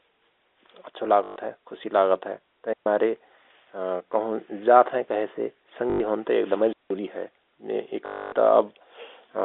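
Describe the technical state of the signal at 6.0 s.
At 6.0 s the packet loss with last packet repeated ends. From 5.9 s, 100 ms of audio was replaced by a repeated packet, giving a robotic 50 Hz buzz consistent with 20 ms packets.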